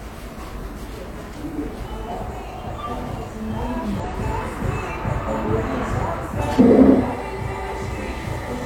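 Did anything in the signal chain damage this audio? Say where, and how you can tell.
Yes, damaged data in a compressed stream at the codec or storage stage: brief glitches at 4.00–4.05 s and 6.55–6.60 s, where the decoder lost sync on bad frames.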